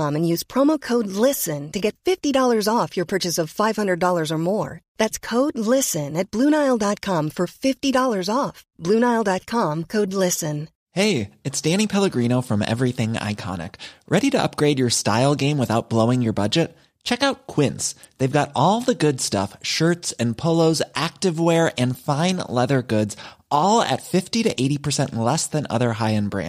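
No technical faults can be heard at any point in the recording.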